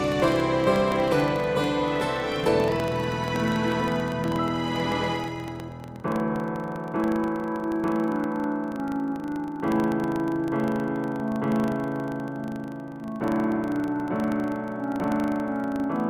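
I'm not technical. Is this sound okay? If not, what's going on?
No. A steady buzz runs from start to finish, caused by a filter restarted on every block. The processing forgets its state 25 times a second, so each fresh start adds a tiny tick. These merge into a 25 Hz buzz that grows louder with the sound.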